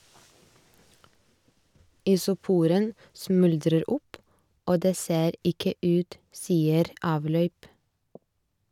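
Listening to this speech recording, nothing stood out as a technical problem at any point.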